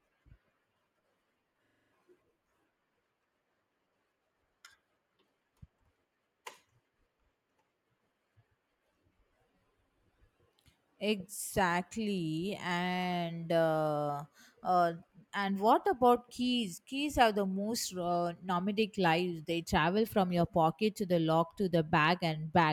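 At 1.66 s the playback system briefly stalls while the audio hardware keeps replaying the same small ring buffer, a system hang loop lasting until 1.92 s. A chunk of speech about 43 ms long, which fits a 2048-sample buffer, repeats exactly six times at roughly 23 Hz, giving a rapid machine-gun stutter instead of a smooth buzz. When playback resumes, around 300 ms of the speech has gone missing.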